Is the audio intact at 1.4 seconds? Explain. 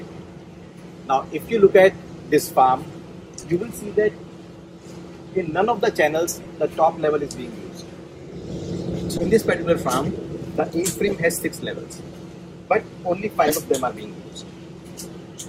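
Yes, at 1.4 seconds the audio plays through cleanly, with no dropout, click, distortion or other fault.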